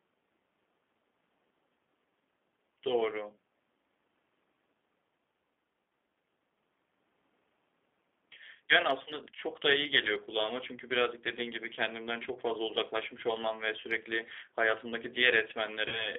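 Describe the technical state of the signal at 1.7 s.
G.729 coding affects 1.7 s, as it does the whole clip. The speech is rebuilt from a vocal tract filter, a pitch predictor and a few pulses per short frame, which fits an 8 kbit/s codec. The band is limited to 200 Hz to 3.5 kHz, and the coding leaves the speech plainly rough and synthetic.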